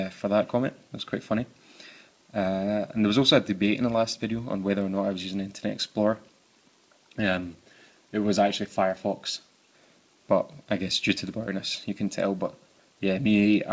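No faults are audible in this audio; the band tops out at 8 kHz, which fits a wideband call codec such as G.722 on a normal call path.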